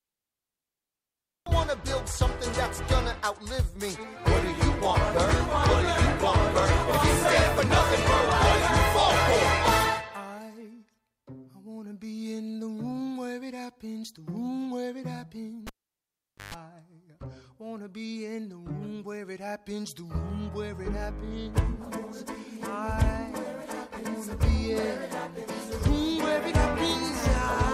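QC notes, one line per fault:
15.67–16.54 s, cable pulled and plugged in: a live lead was pulled and reinserted, giving a pop, about 0.82 s of near silence, a 0.14 s burst of 50 Hz mains buzz, then a pop.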